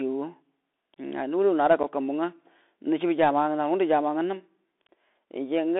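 A speech recording carried over a Bluetooth CVSD headset codec: the spectrogram stops sharply near 3.6 kHz and thins below 250 Hz, sibilants sound scratchy, and granular hiss shows as a speckled noise floor, all fitting a 64 kbps CVSD link. At 1.83 s, unconcealed Bluetooth headset packet loss leaves a gap of about 7.5 ms, consistent with a single lost packet, visible as an abrupt flat notch in the waveform and a thin vertical gap on the spectrogram.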